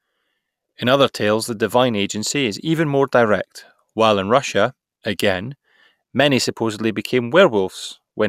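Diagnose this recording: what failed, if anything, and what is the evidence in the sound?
Nothing in this speech recording points to a failure at any stage of the chain. No audible evidence calls for a diagnosis.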